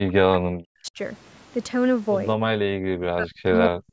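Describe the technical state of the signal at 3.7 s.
At 3.7 s the speech is sinking hard, dropping by roughly 40 dB from 3.68 s until the clip ends at about 3.9 s. That's speech suppressed in double talk, likely because the echo canceller mistook this talker for loudspeaker echo while both sides spoke, and turned everything down.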